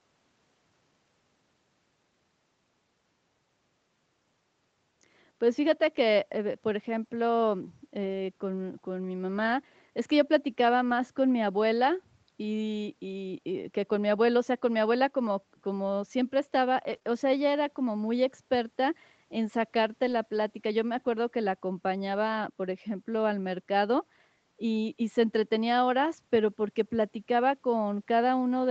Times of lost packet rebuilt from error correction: 10.89-10.91, 16.91-16.97, 20.08-20.14

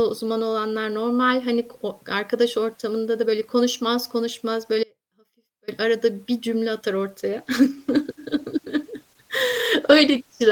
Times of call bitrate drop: 7.18-10.51

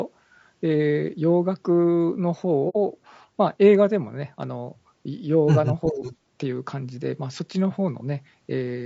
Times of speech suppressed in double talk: 5.91-6.03

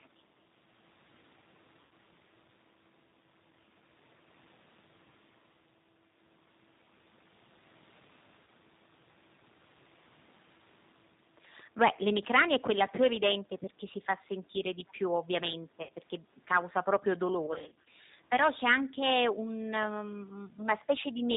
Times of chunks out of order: none

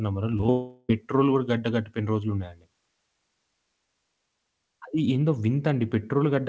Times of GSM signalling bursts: none

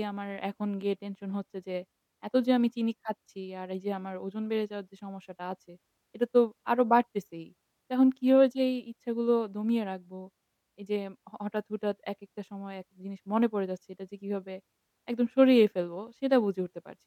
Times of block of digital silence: none

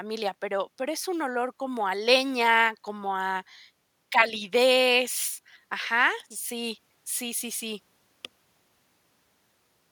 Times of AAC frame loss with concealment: none

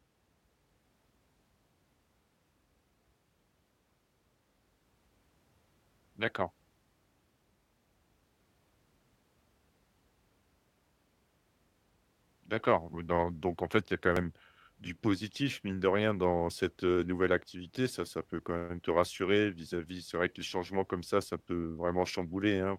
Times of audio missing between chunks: 14.16

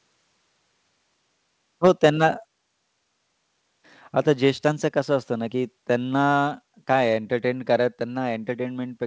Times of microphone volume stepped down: 2.43

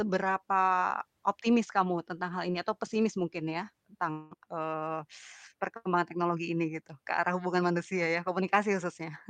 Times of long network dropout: 4.11-4.33

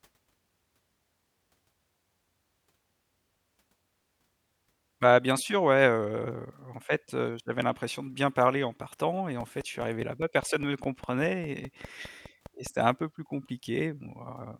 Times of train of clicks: 9.40-12.67

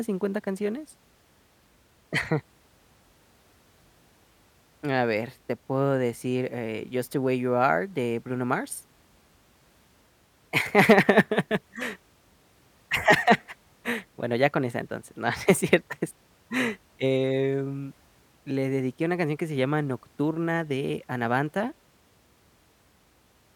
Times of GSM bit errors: none

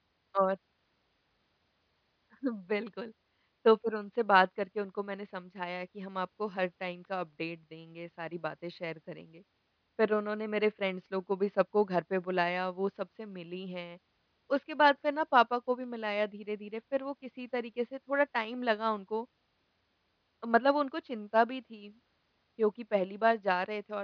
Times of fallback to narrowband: none

